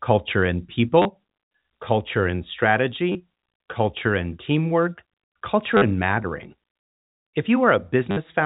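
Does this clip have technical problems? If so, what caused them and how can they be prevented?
Yes. The speech has four short dropouts from packet loss with the last packet repeated, at 1.02–1.05 s, 3.12–3.15 s, 5.77–5.82 s and 8.11–8.17 s, lasting 30, 30, 50 and 60 ms. Each time, the receiver replayed its last audio packet until new ones arrived. The longer gaps give a brief robotic buzz near 100 Hz, which fits 10 ms packets. The 4 kHz telephone bandwidth of the G.711 coding is audible throughout. Prevent it with a larger jitter buffer, proper packet loss concealment, and a less congested network path.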